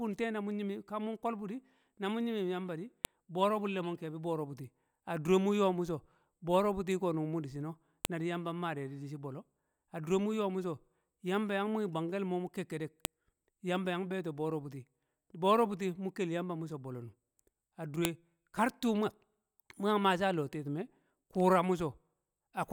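Sharp clicks at 3.05 s (after "nyim nyim yamba di"), 8.05, 13.05 and 18.05 s, every 5 s: file header played as audio, from joined pieces whose headers were left in.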